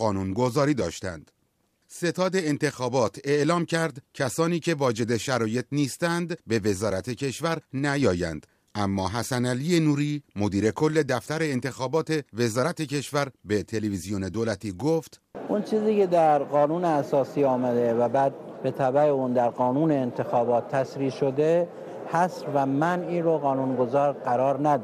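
No technical faults are heard anywhere in the audio.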